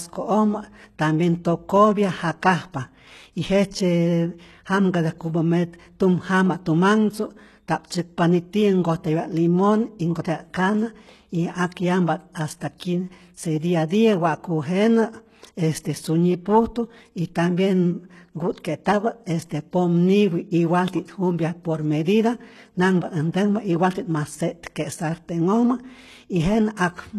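HE-AAC compression, throughout the speech, likely the cause: everything above about 12.3 kHz is missing, and the treble heard is rebuilt by copying lower bands upward rather than coded, so s sounds turn gritty and lispy, which fits a very low bitrate near 16 kbps.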